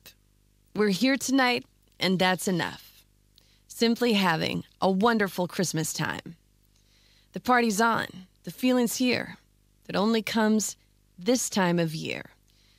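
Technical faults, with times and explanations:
Throughout: video or display buzz, a faint 50 Hz buzz with hash above it and a thin whistle near 15.6 kHz, roughly 40 dB under the speech. The line-rate tone and raspy hash separate it from plain mains hum.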